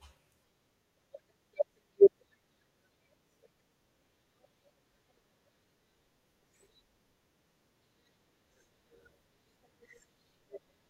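From 8.41 to 10.40 s, periodic USB or driver dropouts skip about 2 ms every 1.0 s. Each bus stall drops audio, heard as ticks in the speech.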